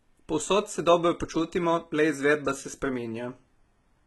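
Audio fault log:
Throughout, HE-AAC compression: the speech has heavy codec damage, with the upper treble bright but synthetic and nothing at all above about 11.8 kHz. Sibilants come out gritty and lispy, with a metallic sheen, because the high band has been rebuilt from copies of lower bands under a coarse envelope rather than coded directly, so its harmonics do not line up with those below the crossover. The degree of damage fits a low bitrate around 16 kbps, likely from HE-AAC encoding.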